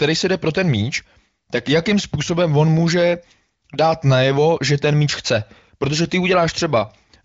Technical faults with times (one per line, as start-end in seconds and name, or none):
none